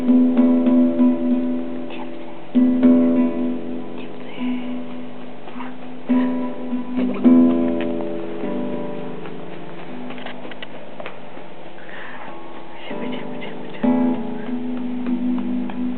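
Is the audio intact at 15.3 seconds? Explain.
Yes, the audio at 15.3 seconds is intact, with no dropout, click, distortion or other fault at that moment.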